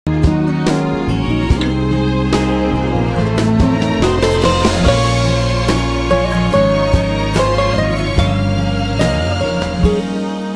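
No technical faults can be heard anywhere in this clip.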